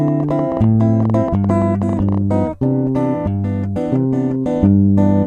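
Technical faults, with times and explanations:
0.08–2.18 s, train of clicks: roughly thirty near-identical pulses tick over the sound at an uneven pace averaging about 12 per second, peaking about 5 dB above it. The likely cause is outside interference. Unlike dropouts or crackle, the clicks are added, same-shaped and repeated.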